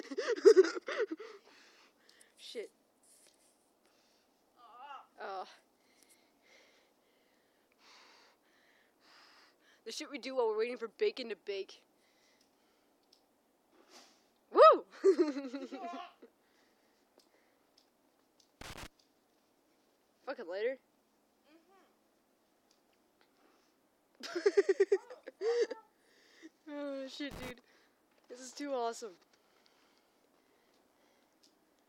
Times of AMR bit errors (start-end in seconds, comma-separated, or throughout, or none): none